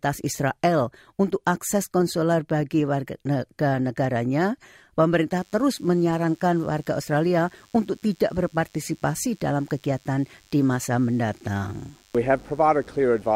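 From 5.36 s to the end, a DECT cordless phone buzz appears. Radio bursts every 10 ms get rectified, giving a thin 100 Hz buzz, roughly 35 dB below the sound.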